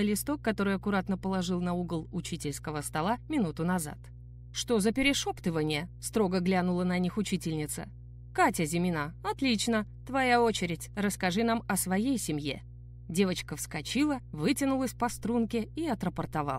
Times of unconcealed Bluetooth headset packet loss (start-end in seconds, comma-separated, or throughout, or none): none